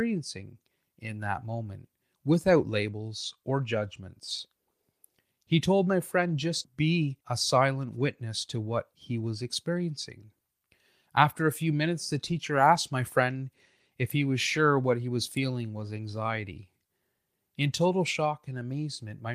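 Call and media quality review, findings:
No audible faults found in the speech recording; nothing to attribute to any component in the capture, transport or playback path.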